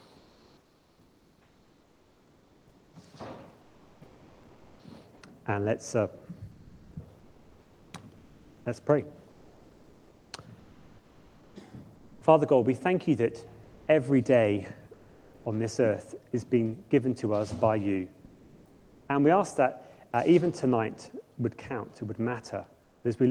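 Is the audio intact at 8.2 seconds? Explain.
No. At 8.2 s the clip sits inside a stretch of comfort noise in place of the background, running from about 6.51 s to 8.65 s, with roughly 1.66 s of the real ambience replaced. The sender has likely stopped transmitting during a detected pause, as Opus DTX does, and the receiver fills the gap with generated noise. Unlike a dropout or gate, this is not silence: a flat, textureless hiss stands in for the detailed background until the sound resumes.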